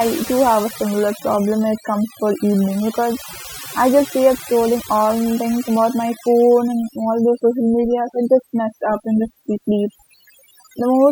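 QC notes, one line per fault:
Throughout: overdone noise removal. The noise reduction was pushed too hard, so frequency bands near the noise estimate are cut almost to nothing, taking quiet speech detail with them. The background drops to near silence with twinkling specks. The specks set it apart from plain low-pass dullness or gating.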